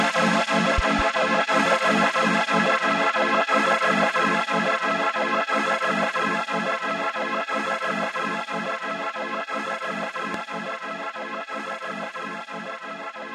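A pair of loud pops at 0.78–1.02 s and one at 10.34–10.37 s thump well above the sound, likely voltage spikes from a switch or static.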